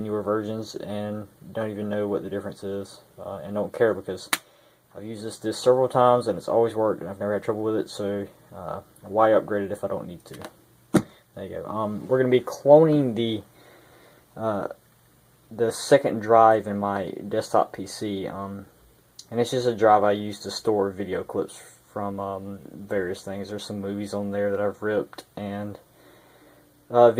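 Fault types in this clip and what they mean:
No technical faults turn up anywhere in this recording; the signal holds steady from beginning to end without any break, distortion or interruption.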